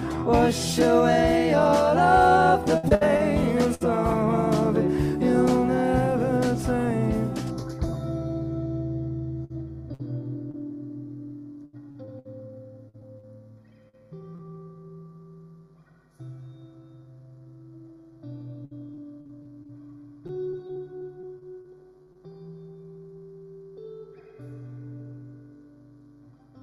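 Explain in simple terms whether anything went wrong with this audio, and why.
Data packets were repeatedly lost or arrived late at 2.77–3.82 s, 9.44–10.55 s, 11.65–14.41 s and 18.65–22.17 s. Each hole was patched by stretching the previous sound, with gaps up to 76 ms. This repeated packet loss makes the audio choppy and robotic, with pieces missing.

From 7.51 s to the end, one channel runs a tiny fraction of a millisecond behind the other before they are mixed together. This channel delay causes comb filtering: some frequencies cancel, starting around 3 kHz, so the sound becomes hollow and phasey.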